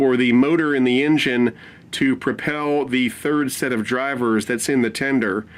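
A call bitrate drop runs from 2.36 to 4.42 s: the bandwidth estimate fell and the encoder was starved of bits, coding the sound more coarsely. The roughness fits a fall from about 64 kbps to 28 kbps, holding at its worst for 1.25 s before recovering.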